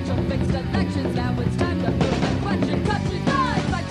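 No technical fault can be heard anywhere in the audio; the signal stays continuous and intact throughout.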